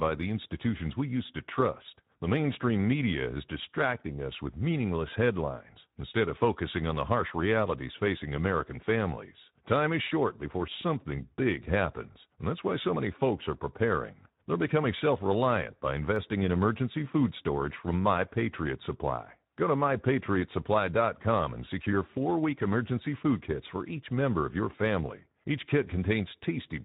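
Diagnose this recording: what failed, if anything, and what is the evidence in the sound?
The codec stage failed, with Speex codec damage running through the whole speech clip. The voice sounds hoarse and noisy, which fits a bitrate near 11 kbps. At that rate the CELP coder has too few bits for the excitation, so fine voiced detail becomes coarse noise.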